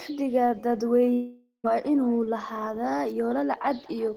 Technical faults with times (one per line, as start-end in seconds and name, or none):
0.00-4.16 echo with no canceller
1.13-1.66 long network dropout